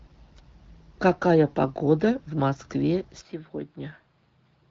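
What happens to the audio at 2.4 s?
At 2.4 s the speech is intact, with nothing wrong beyond the light, steady coding of the AMR wideband (HD Voice) codec at 12.65 kbit/s that runs through the whole clip.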